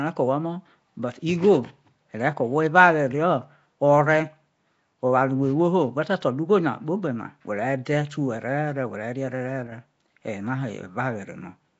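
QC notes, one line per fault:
Throughout, Nellymoser compression: the speech is plainly damaged, with a rough hissy halo and a smeared underwater quality, and nothing above about 7.7 kHz. That fits the likely culprit, Flash's old Nellymoser Asao codec at around 32 kbps, starving weak bands of bits and filling them with noise.
9.67 to 9.72 s, one channel drops out: for about 50 ms the speech dips abruptly by about 6 dB, then comes straight back. That's the likely result of one stereo channel vanishing briefly, so the mono sum loses half of what both channels shared.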